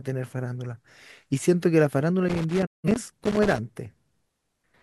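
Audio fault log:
2.29–3.58 s, loose connector crackle: A worn or dirty contact in the signal path is shifting and intermittently breaking, so for about 1.3 s the speech is chopped by rapid make-and-break interruptions. Any DC sitting on the line turns each reconnection into a pop. The result is an uneven burst of scratchy crackle laid over the speech, with no steady rhythm, because the contact opens and closes as it moves.
2.65–2.89 s, digital broadcast dropout: The receiver stopped getting usable digital frames, either because it lost the signal or because frames failed their checks, and it muted until valid data returned. The speech fades out over about 20 ms and goes silent for roughly 170 ms, a gap that fits a few consecutive frames being discarded. It then comes back further along, so whatever was transmitted during the hole is missing. The dropout falls inside the crackle burst.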